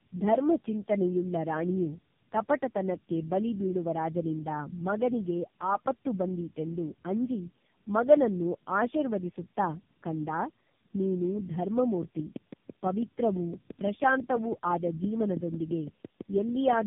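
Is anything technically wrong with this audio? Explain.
Yes, there are two faults. Tandem speech coding runs through the whole speech clip: the call seems to have crossed a GSM full-rate link, then AMR-NB at 7.4 kbit/s, then AMR-NB at 7.95 kbit/s, with G.711 mu-law hops between them. Each coder re-encodes the previous one's errors, so the speech turns rough, muffled and warbly, with nothing above 3.7 kHz. A single narrowband codec would sound dull but smoother, without this stacked graininess.

From 12.03 s to 16.74 s there is a train of clicks, roughly thirty of them at a steady 5.96 per second, peaking a little above the speech level. The ticks are alike in shape and continue through the pauses, which is likely due to interference from nearby equipment or a faulty connection or power supply. That evenness and persistence distinguish them from random crackle or codec frame errors, which would follow the speech and vary in character.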